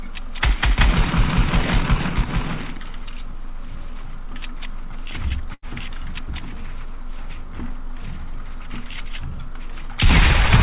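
A burst of packet loss hits at 5.54 to 5.65 s. A short run of the call's audio packets never arrived in time, so the receiver filled roughly 83 ms by extending the last sound it had and letting it fade out. Playback then picks up again at a later point, having skipped about 90 ms of the original. The result is a brief smeared, dying tail followed by an abrupt jump. Across the whole clip, nothing is heard above 4 kHz, which fits a narrowband G.711 A-law call path.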